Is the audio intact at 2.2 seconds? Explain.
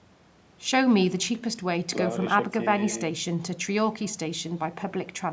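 No. At 2.2 seconds, as through the whole clip, there's an echo with no canceller. The far end is playing the call over a loudspeaker, their microphone picks it up, and nothing strips it out, so the speech comes back after the network round trip. You hear each phrase shadowed about a fifth of a second later by a thinner copy, about 26 dB below the speech. The call microphone processing, with nothing above 8 kHz, is normal.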